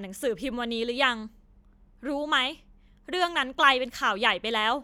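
No technical faults are audible.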